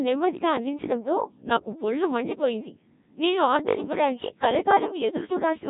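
From the first moment to the last, the speech has gone through a Codec 2 vocoder, heavily damaged, with the buzzy, robotic quality of a mode around 1.3 kbit/s. Only pitch, voicing, energy and envelope survive, rebuilt from sine waves, and nothing sits above 3.8 kHz.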